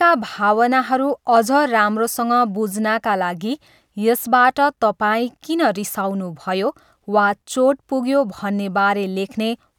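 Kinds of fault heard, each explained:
No kinds of fault are heard in this clip.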